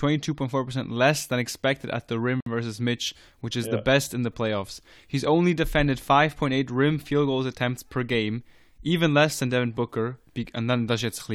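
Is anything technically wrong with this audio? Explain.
Yes, there is one fault. A gap at a join of encoded pieces runs from 2.41 to 2.46 s, about 59 ms long. The speech appears to have been encoded in separate pieces and joined without trimming, so each piece's padded final frame and the silent delay the encoder adds at the start of the next both remain. The continuous speech drops out briefly, the codec softens the gap's edges so the truly silent part is shorter, and the speech resumes from where it stopped.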